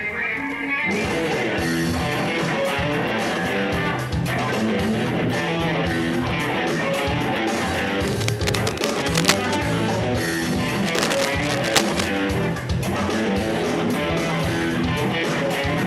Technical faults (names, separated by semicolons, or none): cable scratch noise